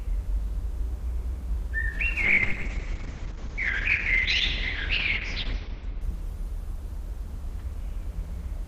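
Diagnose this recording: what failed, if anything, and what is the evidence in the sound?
A call bitrate drop at the codec stage, driven by the call's bandwidth estimate collapsing. From 2.27 s to 8.53 s the sound loses its top end, with the audible band narrowing from roughly 20 kHz to about 6 kHz, and the texture turns coarse and watery. That fits the encoder falling from around 128 kbps to near 6 kbps. It stays at its worst for about 2.9 s, quantising coarsely and discarding high frequencies before recovering.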